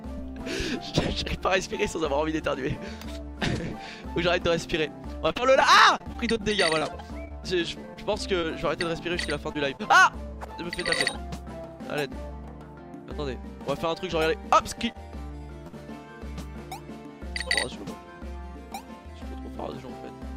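Repeated packet loss (robotic sound) runs from 5.27 to 8.45 s. Over those three seconds the stream drops out about twenty times, with the longest hole near 38 ms. Each gap is bridged by extending the preceding sound, and roughly a tenth of the stretch ends up synthesised this way. About a quarter-second of real audio is simply gone, leaving the passage choppy, with fragments clipped out.

Short concealed packet loss follows at 9.53 s and again at 9.77 s. Each time about 20 ms of audio failed to reach the decoder, and the receiver papered over the hole by carrying the last sound forward before blending back into the real signal. The repair spans roughly 20 ms at each point and is heard as a quick smear or wobble, with a sliver of sound briefly missing.

Short stalls from a late packet occur at 14.92 s and 15.67 s. Here the packet arrived behind schedule, the jitter buffer ran dry, and the receiver stretched the current sound to cover the wait, about 25 ms at the first point and about 59 ms at the second, then resumed exactly where it left off. 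Nothing is lost; instead a sound lingers slightly too long, with a faint buzz or dip.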